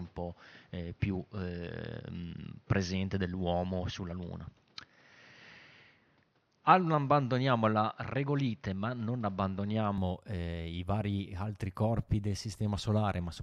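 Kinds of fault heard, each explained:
Input switched to a poorer device: until 9.98 s, just before "eh i vari altri", the speech is dull, with nothing above 6.4 kHz and faint noise of its own, then clears without gap or level jump. That changed noise, unlike plain filtering, marks a likely microphone change.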